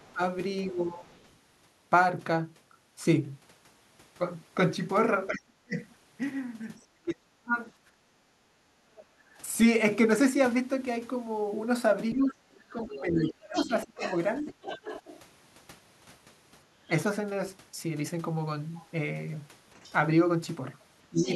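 From the start to 1.14 s the echo canceller likely mistook simultaneous talking for echo, causing speech suppressed in double talk: the speech dips by around 20 dB in short pieces. Between 0.07 and 1.37 s, residual echo the canceller likely failed to remove leaves the other side's voice leaking through, faint and well below the speech. From 5.28 to 8.44 s the suppression deepens to roughly 40 dB, chopping the speech for about a second in total. Between 7.9 and 9.33 s, with the background gated by the echo canceller, the microphone is clamped during playback and the room sound drops by about 13 dB before recovering. From 8.96 to 15.2 s the leak returns louder, and from 12.15 to 14.53 s speech is pulled down by around 25 dB. The leak reappears from 19.85 s to the end, with a brief dip at 21.1 to 21.28 s.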